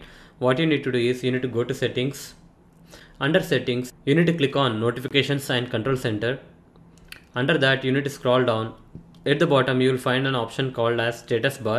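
There's a gap at a join of encoded pieces at 5.08 to 5.11 s: the sound drops out for 24 ms with smeared edges, then resumes where it stopped, as if separately encoded sections were butted together with their encoder delay and padding left untrimmed.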